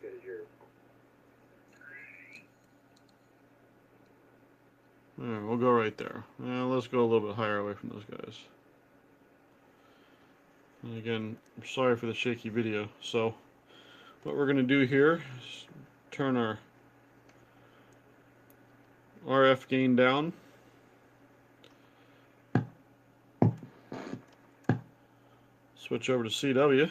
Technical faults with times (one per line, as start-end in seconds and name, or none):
none